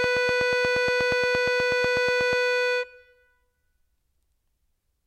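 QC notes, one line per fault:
0.04–2.34 s, train of clicks: about twenty similarly shaped clicks at a steady 8.3 per second, roughly 10 dB above the music, likely interference from nearby equipment. The even spacing and repeated shape mark it apart from random vinyl-style crackle or isolated dropout clicks.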